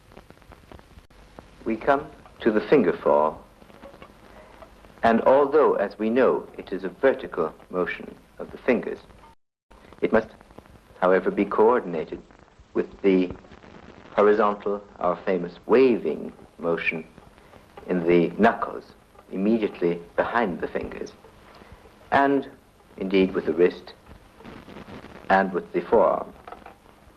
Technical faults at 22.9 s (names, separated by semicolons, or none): none